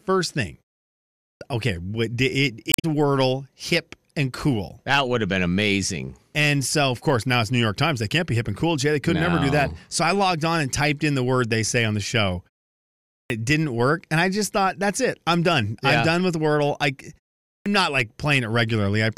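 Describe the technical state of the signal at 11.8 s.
At 11.8 s the signal is intact, with no fault present at that moment.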